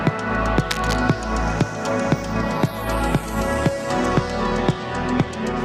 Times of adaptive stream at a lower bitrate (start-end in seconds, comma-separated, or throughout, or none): 2.33-5.65